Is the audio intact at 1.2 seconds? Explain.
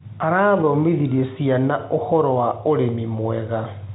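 Yes, at 1.2 s the audio is intact, with the speech carried through G.711 telephone coding and its band ending just under 3.9 kHz.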